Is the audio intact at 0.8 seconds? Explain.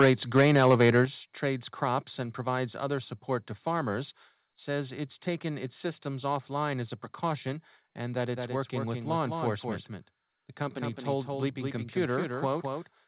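No. From the start of the clip to 1.01 s, the speech has a harsh, crackling edge on its loudest syllables, and it clears just before "trades crops". This is microphone overload. The likely cause is an input level set too high, so the peaks ran about 7 dB past the converter's limit. Their tops were sheared flat, affecting a few percent of samples, and that flattening adds the gritty distortion heard at 0.8 s.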